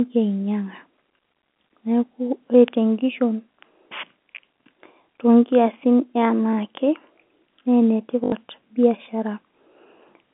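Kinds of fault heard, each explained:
Packet loss with last packet repeated: from about 8.24 to 8.32 s, an 80 ms chunk of the speech goes missing, and the receiver plugs the gap by replaying the last good chunk until fresh audio shows up. Those loops don't line up with the pitch, and the run buzzes near 50 Hz, which fits four 20 ms packets lost in a row. It comes across as a quick robotic stutter on the narrow telephone-band sound.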